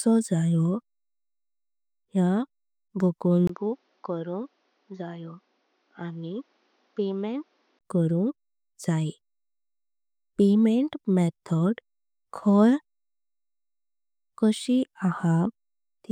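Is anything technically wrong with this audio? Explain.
Yes. From 3.47 to 7.81 s the input likely switched to a poorer device, one passing nothing above 6.8 kHz, with its own level and noise floor. After a 20 ms gap the speech turns dull and boxy, drops roughly 10 dB, and gains faint new noise about 40 dB down, then clears again.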